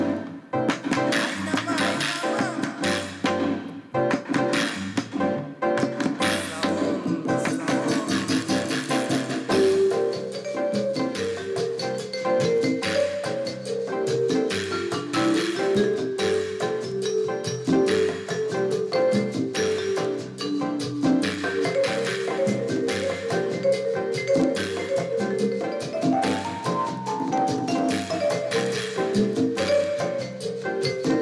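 Nothing in the audio stood out as a technical problem on listening.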